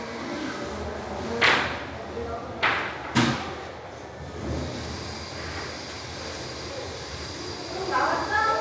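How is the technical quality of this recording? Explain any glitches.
No glitches; the recording has no audible technical faults.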